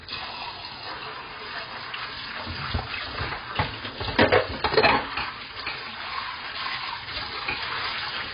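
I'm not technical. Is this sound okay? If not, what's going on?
No, not quite. The whole clip has a dull, muffled quality, with a watery, swirly texture on anything that lingers. Nothing above about 5 kHz survives, so the crisp top end is simply gone. That points to heavy AAC compression, likely squeezed down hard to save space. The encoder threw away detail it judged least important, and at this level it discarded enough that you can hear the gaps.

Then, from about 2.74 to 2.82 s, there's a loud pop, actually two quick ones back to back, jumping well above the rest of the sound while it carries on underneath. That's a sudden electrical jolt added on top of the audio. The likely culprit is something like a connector being bumped, a switch flicked, or a brief hiccup in the equipment.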